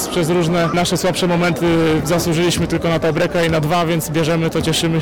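Hard clipping runs through the whole clip: the signal is driven about 16 dB past what the stage can pass, so nearly a third of it has its peaks sliced flat. The result is a harsh fuzz on every loud sound rather than the rounder, gentler thickening of soft saturation.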